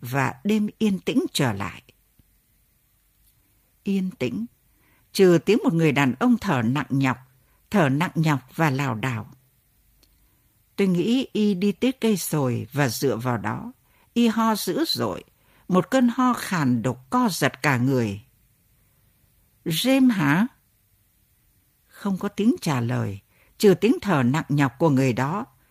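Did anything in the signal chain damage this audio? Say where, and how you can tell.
Yes. All through the clip the speech has a faint, uneven stumble, with small hiccups at irregular spacing rather than at any one moment. That points to clock drift between sender and receiver at the network and jitter-buffer stage. The sending device's clock runs slow, by roughly one and a half percent, so audio arrives a little more slowly than the receiver plays it out. The buffer keeps draining, and the receiver has to make up the shortfall.

The repeated timing corrections run from 0.16 s to 25.29 s. They are heard as slight repeats and a subtly unsteady pace, with the delivery running at about 99% of its natural speed. Each correction stretches the stream by repeating a short piece to refill the draining buffer. The edits all go the same way and are spaced unevenly, and together they add something like 400 ms to the clip. 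That one-directional padding is what identifies the corrections as a drift fix rather than random packet loss.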